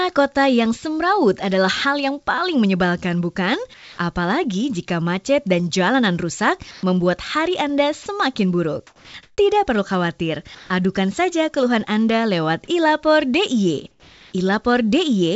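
At 3.74, 6.71, 8.03, 8.87 and 10.55 s the sound briefly gives way to flat, steady noise for 240, 120, 30, 270 and 150 ms. It's likely sound dropped by the voice detector, which misread the sound as background, so the receiver filled those gaps with generated noise.

Also at 9.23 s (150 ms) and 13.91 s (420 ms) the real background turns into smooth, featureless hiss. That's likely comfort noise in place of the background, about 7 dB louder the first time and about 3 dB quieter the second. Throughout, nothing sits above 8 kHz.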